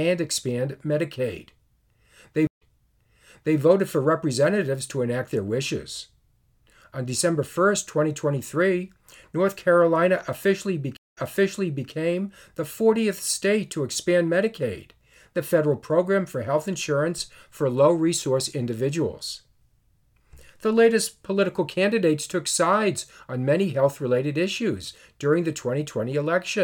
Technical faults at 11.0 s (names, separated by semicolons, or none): stream reconnect